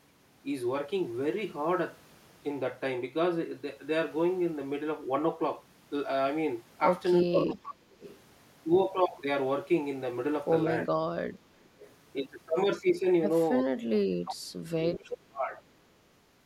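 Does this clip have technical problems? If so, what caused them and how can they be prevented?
Yes. Speech suppressed in double talk occurs three times. From 7.23 to 7.81 s the speech dips by up to about 20 dB. A brief dip of about 25 dB follows at 13.63 to 13.68 s. From 14.24 to 15.44 s the speech drops by up to about 35 dB for roughly a second. Both ends seem to talk at once here. The echo canceller likely cannot tell this talker from loudspeaker echo, so it attenuates everything. A full-duplex canceller with better double-talk detection, or a headset, prevents this.

Echo leak appears in five places: 7.38 to 7.43 s, 8.0 to 8.2 s, 11.61 to 11.9 s, 13.59 to 13.63 s and 14.92 to 15.11 s. Each is a short delayed copy of the speech, 415 ms late in the first two and 357 ms late afterwards. The first is about as loud as the speech itself. The others sit about 10 to 25 dB below it. The far side is likely on a loudspeaker, and its canceller lets residual echo through. 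Using headphones or tuning that end's echo cancellation prevents it.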